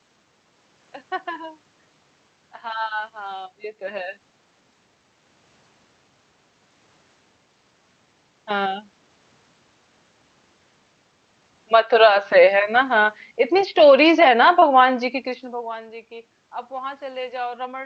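At 11.59 s the automatic gain falling begins. The gain control judged the input too loud and started pulling its gain down, and the level sinks gradually until 15.73 s, by about 7 dB in all. The room noise drops along with the speech, and that is what separates it from a talker leaning back. A change in distance would alter the voice at the microphone while leaving the background steady.

Inside that slide, from 11.95 to 12.44 s, an automatic gain rising cuts in. The control briefly decided the input was too quiet and lifted its gain by about 5 dB over roughly half a second, so speech and background swell together before the downward drift resumes. The swell is smooth rather than abrupt, and it takes the background with it, which marks it as a gain adjustment. A talker moving closer would raise only the voice. The back-and-forth within a few seconds points to the control hunting rather than settling.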